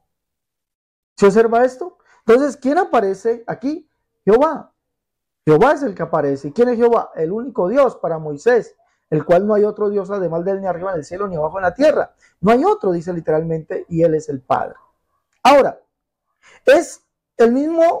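No technical faults are audible.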